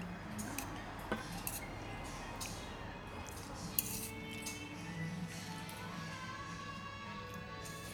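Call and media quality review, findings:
Nothing to flag on this one; the audio came through without any problems worth noting.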